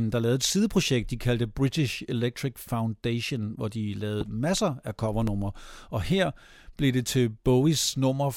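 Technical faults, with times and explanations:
4.21–4.24 s and 5.27–5.30 s, loud pop: single sharp pops, after "hvor de" and after "masser af", peaking about 10 dB above the speech, likely a voltage glitch; tall waveform spikes, thin broadband spectrogram stripes.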